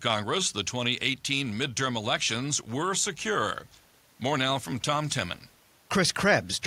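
Listening to the speech, nothing stood out as a technical fault at any point.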